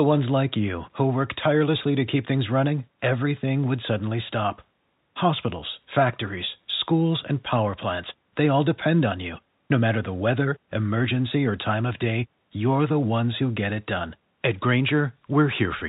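Nothing here stands out as a fault: the speech simply carries the usual narrow telephone-line character of G.711 coding, and there's nothing to flag.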